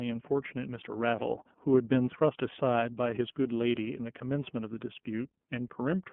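Speech runs through the iLBC codec for the whole clip, giving a narrowband telephone sound: the band sits between 150 Hz and 3.4 kHz, so a spectrogram shows a hard ceiling near 3.4 kHz with empty space above and a thin floor below 150 Hz. Each block is coded independently, with a grain that points to 30 ms frames and the 13.33 kbps mode, leaving a plainly audible rough, synthetic edge.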